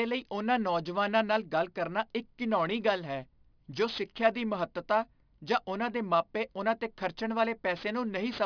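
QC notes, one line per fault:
throughout aliasing: The speech was brought down to a rate that fits about 11 kHz from 48 kHz without an anti-aliasing filter beforehand, so everything above the 5.5 kHz folding point reflects back down into the band as false, unrelated frequencies, landing at roughly 20 dB below the signal. Sibilants and fricatives take on a gritty, metallic edge, and the spectrum stays dense right up to 5.5 kHz instead of rolling off.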